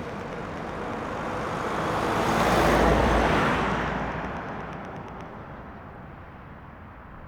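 From 0.10 s to 5.22 s a train of clicks runs over the sound: near-identical pulses at a steady 8.2 per second, around forty in all, each peaking around 5 dB above the surrounding audio and ticking through the pauses as well. The even spacing and repeated shape suggest a periodic source, likely interference from nearby equipment or a faulty connection or power supply. Random crackle or dust-like noise would instead vary in size and timing, not keep this metronomic pace.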